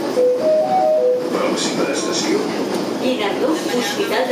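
No technical fault can be heard anywhere in this audio. Nothing in the recording points to a problem in how it was captured, processed or delivered.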